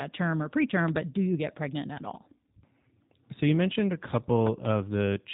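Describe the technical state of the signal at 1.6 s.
At 1.6 s you're hearing G.729 codec damage, present across the whole clip. The speech is rebuilt from a vocal-tract filter, pitch predictor and a few pulses per frame, so it sounds plainly rough and synthetic, with nothing above 3.8 kHz, which fits an 8 kbit/s stream.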